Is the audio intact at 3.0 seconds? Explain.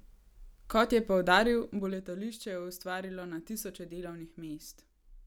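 Yes, at 3.0 seconds the speech is intact, with no fault heard at that moment.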